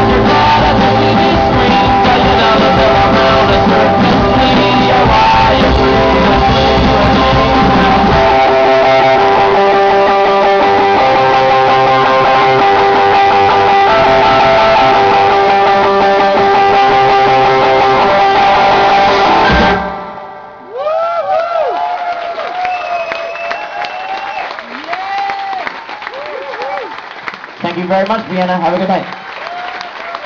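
No technical faults can be heard anywhere in the clip.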